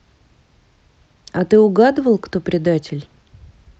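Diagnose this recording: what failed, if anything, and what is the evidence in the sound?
Nothing here has failed: the speech arrives as you'd expect after a normal call path, with the top end rolled off around 8 kHz, which fits an Opus codec running at a modest call bitrate.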